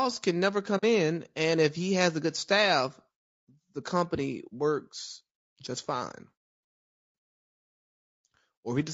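From the start the speech has a rough, grainy texture, most likely from low-delay AAC compression (AAC-ELD) at a bitrate around 32 kbps. Its short frames separate pitch harmonics poorly, so noise fills the gaps between them and the top band sounds thin and synthetic. On a spectrogram the harmonic stripes look smeared, with a haze between them, and the upper band is patchy rather than continuous.

At 0.77 s, just after "can never", there is AAC frame loss with muting, which fits two lost frames. The decoder zeroed the missing spectrum for about 60 ms, through 0.84 s, and the overlapping windows faded the sound out and back in. It is heard as a brief soft-edged dropout. The waveform tapers to silence and recovers smoothly, and the spectrogram shows a narrow blank vertical band across all frequencies.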